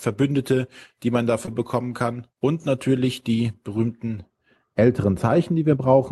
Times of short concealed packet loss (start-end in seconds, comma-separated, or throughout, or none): 1.45-1.53